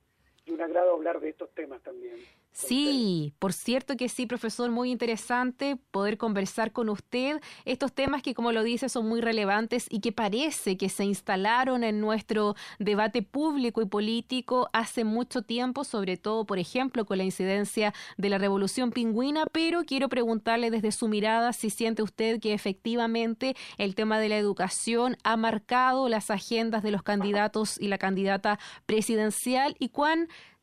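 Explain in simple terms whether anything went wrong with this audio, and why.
A sudden electrical spike, likely from a plug, switch or static discharge, twice jumped into the signal path. Each is heard as a loud pop, a sharp click over the sound, from 8.08 to 8.10 seconds and, somewhat quieter, from 19.47 to 19.49 seconds.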